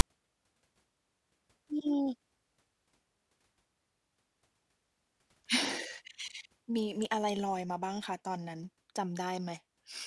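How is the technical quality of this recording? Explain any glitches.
There's one glitch, and it's right at the top. At 0.00 s you get a tiny hard-edged burst of static, a case of file tags played as audio. A block of text metadata at the start of the file got read as if it were sample data, so the character bytes turn into a loud, rasping buzz. Text bytes don't centre on zero, so the burst sits offset to one side of the waveform. It's very short, but abrupt.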